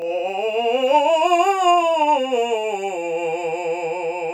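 Channel delay with comb filtering runs through the whole music clip. One channel arrives roughly 20 ms behind the other, and when the two are folded to mono, material common to both cancels at regularly spaced frequencies. The lowest notch sits around 30 Hz, with further dips repeating up the spectrum. The result is a rough, slightly doubled character that stays throughout the music.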